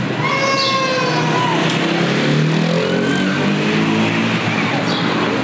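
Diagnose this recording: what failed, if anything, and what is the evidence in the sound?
Gain pumping runs through the whole recording, from start to finish. The level is pulled down each time a loud sound arrives, with a level swing of around 20 dB. Loud and quiet moments sit unnaturally close together, giving a squashed, breathing character. The likely cause is input gain set far too high at the microphone stage, with a fast limiter or compressor clamping down on every peak and releasing into the gaps. Nothing is heard above 8 kHz, which fits the G.722 call path.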